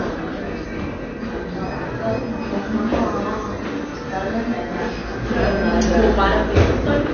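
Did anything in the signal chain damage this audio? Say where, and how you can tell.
Yes, at the codec stage: AAC compression throughout, with nothing above 6.6 kHz and audible smearing, likely from AAC-LC at a low bitrate near 24 kbps.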